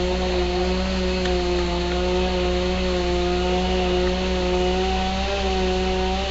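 From start to end the sound carries a rough, hissy halo and a smeared, underwater blur, with nothing above 7.7 kHz, the marks of Nellymoser compression, likely from Flash's old Asao microphone codec at a rate that fits 32 kbps. Its fixed bits per sample starve the weaker bands, which get filled with noise instead. That noisy grain is what sets it apart from a simple low-pass filter, which would sound dull but clean.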